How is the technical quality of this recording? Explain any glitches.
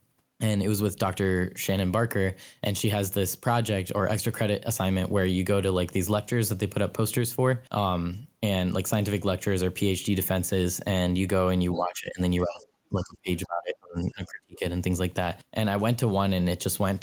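The recording has clear problems in a short stretch of this speech clip, between about 11.7 and 14.6 s.

Other side's voice leaking through occurs at 11.73 to 11.77 s and 12.45 to 12.65 s. A second voice slips in faintly, about 20 dB and then about 30 dB below the speech. The likely cause is loudspeaker playback that the echo canceller failed to remove from the microphone.

Speech suppressed in double talk occurs at 11.74 to 12.19 s, 12.41 to 12.66 s, 12.89 to 13.29 s and 13.46 to 14.63 s. The voice dips, by about 15 dB at first and deepening to about 30 dB. Likely both sides were talking at once, and the echo canceller turned everything down.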